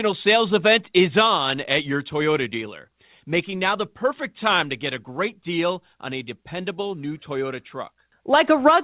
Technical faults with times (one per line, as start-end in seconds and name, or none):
none